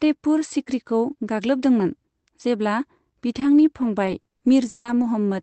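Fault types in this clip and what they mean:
repeated packet loss (robotic sound): five gaps from 3.39 to 5.05 s, each filled by extending the last sound; recurring robotic chop, unlike a single clean dropout.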